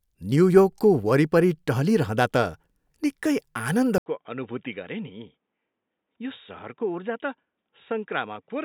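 Input switched to a poorer device at 3.98 s, after a gap of about 80 ms: from there to the end the speech turns dull and boxy, with nothing above 3.8 kHz, drops about 10 dB, and carries a faint new noise floor, likely from a lower-grade microphone taking over.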